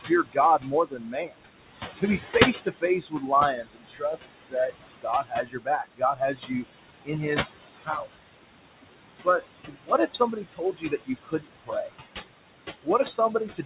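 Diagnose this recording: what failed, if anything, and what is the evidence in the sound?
The failure is in call processing: noise suppressor artifacts run through the whole clip. The room noise, sitting only about 9 dB below the speech, is pulled down by about 19 dB in the pauses and swells back under each phrase. This is per-band gain riding the noise estimate frame by frame. Unlike G.711 coding noise, which stays steady and band-limited at 4 kHz, this residue pumps with the speech.

The same suppressor also mistakes parts of the speech for noise. Speech is cut by the noise suppressor in six spans: 0.00–1.43 s, 1.97–4.55 s, 4.96–6.64 s, 7.05–8.14 s, 9.24–11.93 s and 12.83–13.65 s. Soft consonants and endings are swallowed, with dips of about 20 to 22 dB covering roughly a second of the first, second, third and fifth spans, and less than half a second in the fourth. These are not packet-loss gaps, because the level sags smoothly with the noise floor instead of breaking off abruptly or repeating.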